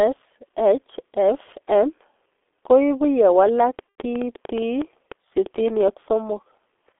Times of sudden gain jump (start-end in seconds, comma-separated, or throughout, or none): none